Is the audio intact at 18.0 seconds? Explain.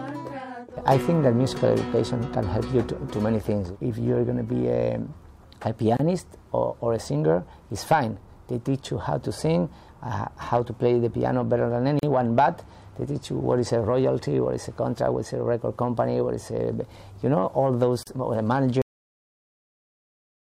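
No. From 18.03 to 18.07 s the sound drops out for about 37 ms and then resumes exactly where it stopped, a brief hole in otherwise continuous audio with softened rather than clean edges. This is a gap at a join of encoded pieces. The audio was encoded in separate chunks, which fits pieces about 6 s long. Each run's start-up delay and final-frame padding were never trimmed before joining, so that silence sits at the seam.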